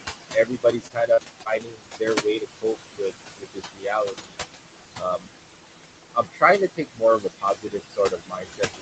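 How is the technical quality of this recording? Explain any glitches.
The recording has clear technical problems. A noise suppressor is struggling against heavy background noise, it repeatedly turns down the speech itself, and there are three brief dropouts early on. The room noise sits close to the speech level, at one point only about 5 dB below it. Nothing is heard above 8 kHz, which fits a wideband Opus call at a low bitrate, around 20 kbps.

Noise suppressor artifacts run through the whole clip. The suppressor estimates the steady background and attenuates each frequency band it judges to be noise, frame by frame. The background dips in pauses and swells back under speech.

Speech cut by the noise suppressor appears across most of the clip: 0.00 to 0.09 s, 0.33 to 6.43 s, 6.68 to 7.03 s, and 7.19 s to the end. The drops reach about 20 to 22 dB. In the long middle stretch, roughly four seconds in total are affected. 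The suppressor misreads soft consonants, word endings and quieter passages as noise and pulls them down with the background. Those parts sound swallowed, faint or clipped short.

Short concealed packet loss occurs at 0.87 to 0.91 s (20 ms), 1.13 to 1.19 s (40 ms) and 1.43 to 1.47 s (20 ms). Audio for these moments did not reach the decoder in time, so the receiver extrapolated from the preceding sound and then crossfaded back into real audio. Each event is heard as a brief smear or wobble.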